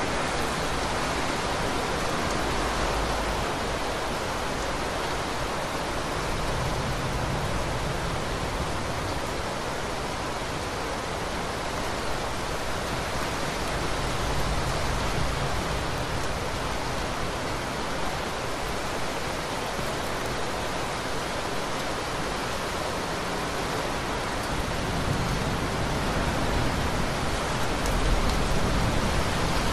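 No technical faults can be heard anywhere in the clip. Nothing in the audio breaks up, drops out or changes abruptly at any point.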